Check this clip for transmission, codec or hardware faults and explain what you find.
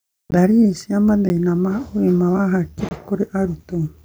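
The clip has one kind of fault, a block of digital silence, occurring three times: at 0.31 s (about 14.5 ms), at 1.29 s (10 ms), and from 2.89 to 2.91 s (about 22 ms). Each time, a run of zeros was played in place of the speech. The speech cuts straight to silence and back with no fade. The two shorter gaps sound like ticks. The longest one is a brief audible hole.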